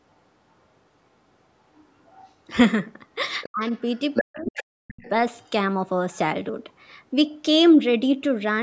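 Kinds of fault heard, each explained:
Other side's voice leaking through: a second voice, likely loudspeaker echo the canceller missed, faint near 1.8 s, strong from 3.4 to 5.1 s; spectrogram shows overlapping, independent harmonic traces.
Speech suppressed in double talk: while both voices overlap, the talker's level plunges by roughly 40 dB, likely canceller suppression; waveform shows near-silent gaps around 3.5 s and 4.2 to 5.0 s.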